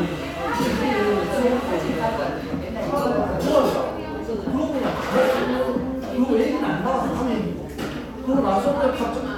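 No technical faults can be heard in this recording.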